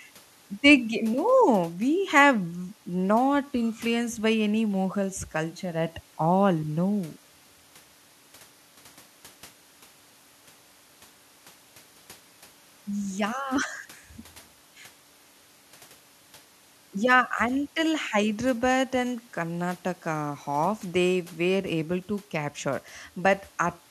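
Nothing stood out as a technical fault anywhere in the speech on listening.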